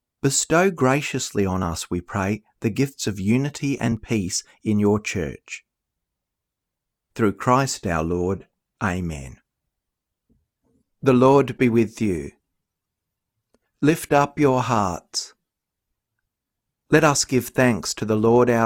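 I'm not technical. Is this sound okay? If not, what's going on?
No, there are three brief clicks in this speech clip, at 1.11 s (just before "on us we pray"), 3.08 s (between "we pray the gifts" and "of unity") and 3.97 s (just before "peace in your church"). Each sounds like likely dropped samples: a tiny slice of the audio, a fraction of a millisecond, goes missing, so the sound jumps abruptly instead of flowing smoothly. The gap is far too short to lose any words, but the sudden jump produces a sharp tick.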